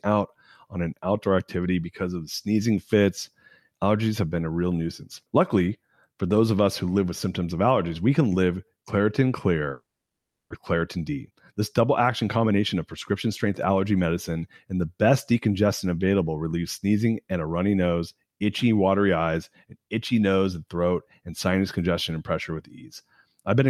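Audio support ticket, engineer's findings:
Long network dropout, 9.71–10.54 s: sound stops and the last fragment carries on as a fading buzz, then near-silence for about 0.7 s, resuming with roughly 0.6 s of audio missing. Likely network/receiver path. Unlike brief packet-loss concealment, the fill decays to silence and content is skipped.

Jitter buffer speed-up, 10.74–13.70 s: playback runs about 6% fast with pitch unchanged, sounding hurried, as the receiver trims short pitch-period pieces to shed around 200 ms of built-up delay after the gap. Same pitch distinguishes it from a sample-rate mismatch.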